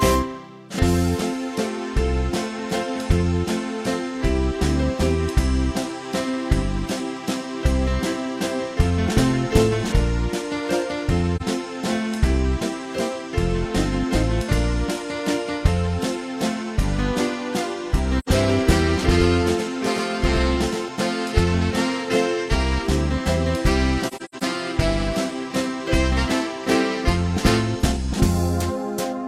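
AAC frame loss with muting at 11.36 s and again at 18.19 s: the decoder zeroed the spectrum of missing frames. The overlapping windows fade the sound out and back in, leaving soft-edged holes. The first lasts about 43 ms, which fits a single lost frame. The second runs about 85 ms, consistent with two.

Doubled audio track from 19.04 to 20.88 s: a full-band copy trails the original by roughly a tenth of a second at about 5 dB lower. It is likely a second, slower capture path mixed in. It has no decay or room colour, and it starts and stops abruptly.

AAC frame loss with muting again from 24.07 to 24.43 s: about 213 ms of sound drops out, scattered over about 340 ms as several short fading gaps. The longest gap is roughly a tenth of a second, which suggests a burst of lost frames.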